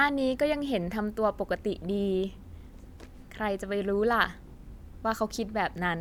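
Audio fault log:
Nothing stood out on listening to the speech in this recording.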